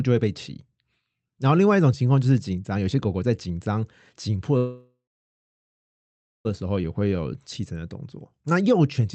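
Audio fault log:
4.57–6.47 s, call audio freeze: the sound stops and a fading fill runs about 1.9 s, mostly silent. Speech resumes where it stopped, likely after delayed packets emptied the jitter buffer.
6.99–7.17 s, jitter buffer slow-down: about 41 ms is added by repeating short periods. Playback drops to 82% speed at unchanged pitch, so sounds stretch.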